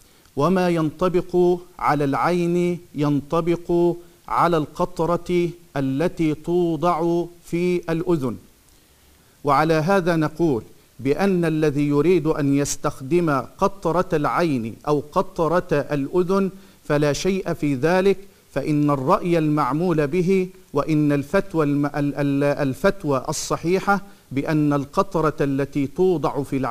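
Nothing technically wrong turns up anywhere in this audio, so there's simply no fault here to time or explain.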